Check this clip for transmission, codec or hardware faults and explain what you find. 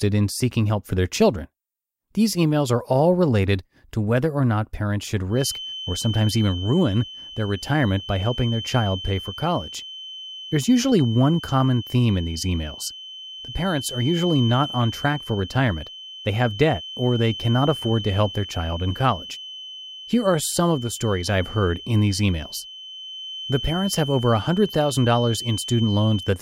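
One fault is present: a feedback whistle in the speech. It begins at 5.28 s and runs to the end of the clip. A thin, steady tone sits at about 3.1 kHz, roughly 15 dB below the speech. It swells and fades slowly in level but never grows. The likely cause is a loudspeaker-to-microphone loop held just short of full feedback. Gain around that frequency is close to unity, so the tone keeps circulating without running away.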